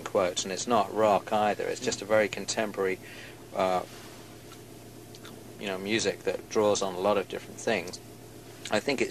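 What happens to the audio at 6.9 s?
Nothing goes wrong at 6.9 s: the audio plays through that moment intact, with no dropout, click, distortion or other fault.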